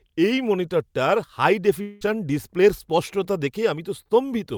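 At 1.81 s, just after "এই মনিটরটার হাই", the sound gives way to a buzzy smear of its own last moment, which fades until speech resumes at 2.03 s with "ডিসপ্লের স্পষ্টতা". About 0.2 s of audio never arrives; this is likely a long network dropout. It differs from a brief packet-loss glitch because the concealment runs for nearly the whole gap, and the passage picks up further on, skipping what was lost rather than merely stuttering.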